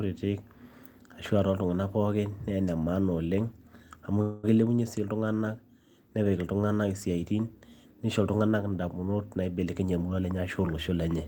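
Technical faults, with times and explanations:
4.21 to 4.45 s, call audio freeze: The sound stops moving forward for about 0.22 s. A buzzy continuation of the last sound fills the whole gap without dropping to silence. The speech then resumes exactly where it left off, so nothing is lost. The cause is likely packets held up in transit, leaving the jitter buffer empty. The receiver stretched the last sound until they arrived. This adds about 0.22 s to the call delay.
9.65 to 10.89 s, jitter buffer speed-up: This stretch runs at about 116 percent of normal speed, with no change in pitch. The speech sounds hurried. The jitter buffer had built up more audio than its target, so the receiver trimmed many short pieces, each one or a few pitch periods long. Together they come to about a fifth of a second. Removing them brings the delay back down.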